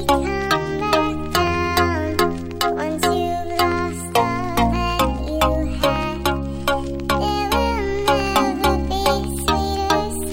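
No technical faults can be heard anywhere in this recording.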